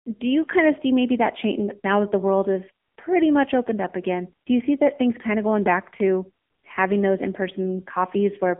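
Throughout, AMR narrowband mobile codec damage: speech band-limited to roughly 200 Hz–3.5 kHz, nothing above 3.6 kHz, with a buzzy, synthetic texture that fits a low-rate mode near 8 kbps.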